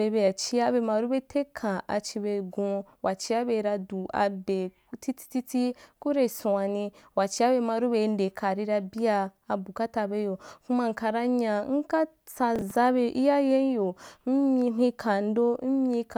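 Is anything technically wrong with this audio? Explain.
Yes. From 12.56 to 12.76 s there is processor overload crackle. The processor fell behind on its small audio buffers, each around 10 ms, and missed about five deadlines in quick succession, replaying stale audio each time. Those repeated hard-edged fragments pile up into a short gritty tearing over the speech that stops once the load clears. A single dropout gives one clean gap or click. This fault is a dense cluster of rough repeats.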